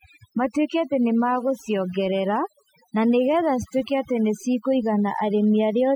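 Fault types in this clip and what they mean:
overdone noise removal: heavy noise reduction strips bands near the noise floor throughout, leaving near-silent gaps with twinkling specks; spectrogram shows patchy, speckled holes.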